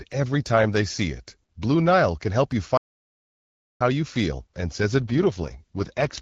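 From 2.77 to 3.81 s the player most likely ran out of buffered data or had its output thread blocked, a playback stall. The speech cuts off mid-flow and the output falls silent for about 1.03 s before resuming.

At 4.98 s, with the link weakening, the AMR-WB codec is pushed to a lower mode and spends more bits on error protection. This AMR rate drop continues to the end. The speech keeps its bandwidth and has no gaps, but it turns rough, raspy and synthetic compared with the light coding texture before it, which points to a step from 12.65 kbit/s down to 6.6 kbit/s.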